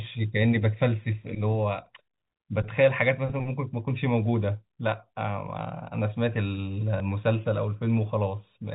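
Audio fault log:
6.98 s, packet loss with last packet repeated: a 20 ms gap in the speech stream was filled by replaying the preceding packet, which fits one lost 20 ms packet. The replay seldom lines up with the pitch cycle, and the single repeat is heard as a small blip through the band-limited G.711 telephone sound.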